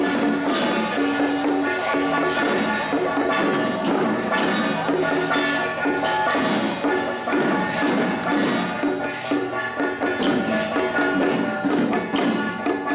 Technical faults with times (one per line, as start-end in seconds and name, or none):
none